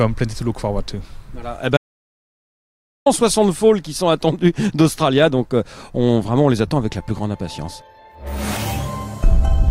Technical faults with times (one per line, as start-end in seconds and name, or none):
1.77-3.06 audio dropout to silence